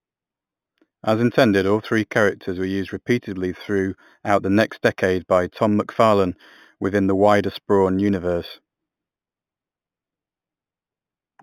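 From start to end, the speech shows imaging from linear upsampling. The audio appears to have started at 8 kHz and been raised to 44.1 kHz by joining samples with straight lines. That interpolation filters poorly. The top of the original band, near 4 kHz, sounds dulled. A mirrored copy of the spectrum sits between 4 and 8 kHz, roughly 30 dB below the signal. It adds a faint metallic shimmer to sibilants.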